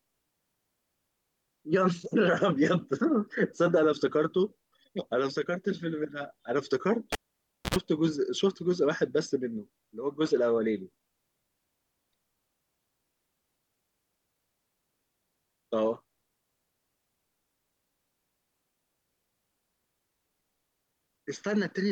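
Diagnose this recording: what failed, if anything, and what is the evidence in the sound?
The failure is in the analogue wiring: a cable pulled and plugged in while the line was live, between 7.12 and 7.76 s. A pop marks the disconnect, then the speech drops to near silence for about 590 ms. As the plug goes back in, only the tip makes contact at first, so an 85 ms burst of 60 Hz mains buzz leaks in unshielded before the sleeve seats. A second pop follows as full signal returns.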